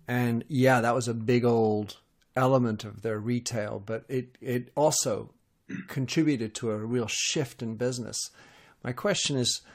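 A speech recording with no audible technical fault anywhere in the signal.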